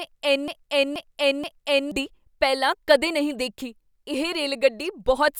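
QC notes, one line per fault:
0.00 to 1.91 s, broken-record loop: the speech opens already stuck, with one fragment of about 0.48 s (478.5 ms) played back to back, repeating three times before normal audio resumes at "ਪਹਿਲਾਂ ਕਦੇ ਨਹੀਂ ਦੇਖੀ". The likely cause is a stalled player or stream that kept resending the last piece it held, so whatever should have played there is lost. On a waveform and spectrogram, identical blocks tile at a fixed 0.48 s spacing.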